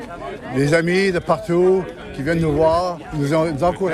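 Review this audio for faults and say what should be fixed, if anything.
No faults can be heard anywhere in the audio, so nothing needs fixing. It can be used as it stands.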